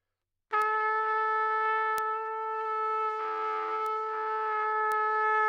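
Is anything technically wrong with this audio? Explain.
Yes. Four bit error spikes occur at 0.62, 1.98, 3.86 and 4.92 s. In each, a single flipped bit pushes one or two samples up by a power of two, to peaks of about −21, −9, −21 and −15 dBFS. Each is a sharp broadband tick unrelated to the surrounding sound.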